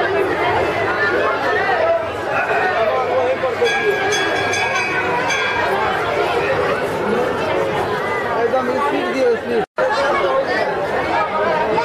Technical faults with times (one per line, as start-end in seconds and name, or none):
none